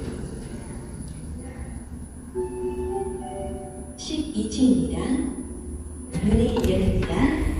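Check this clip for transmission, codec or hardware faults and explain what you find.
Three short faults come from damaged data in a compressed stream, at 1.07–1.09 s, 3.79 s and 6.46 s. Corrupted frames throw the decoder out of sync, producing a brief chirp or blip in the everyday sound.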